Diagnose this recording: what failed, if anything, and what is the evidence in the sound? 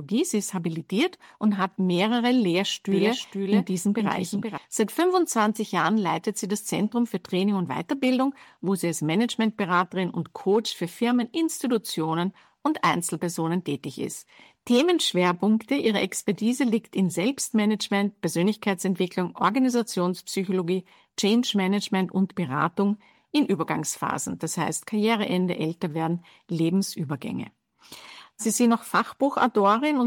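A doubled audio track appears from 2.92 to 4.58 s: a second, full-band copy of the sound trails the original by roughly half a second, about 5 dB quieter, with no decay or room colouring, and it switches on and off abruptly at those boundaries. The likely cause is a routing or capture-stage fault, where the signal reached the mix twice through a slower parallel path or an edit left two misaligned copies overlapping.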